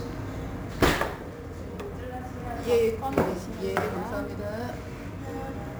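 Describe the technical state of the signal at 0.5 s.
At 0.5 s, as throughout, sample clock jitter of roughly 10 microseconds mistimes samples, adding hiss about 25 dB down that rises with loud, bright sound and vanishes in silence, unlike steady background noise.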